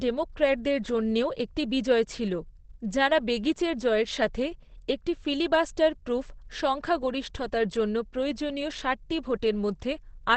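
A speech clip with Opus compression damage throughout: nothing above about 8.4 kHz, and a muffled, hoarse texture that is plainly audible. This is likely the codec's speech mode at a wideband setting, which fits a low bitrate near 16 kbps.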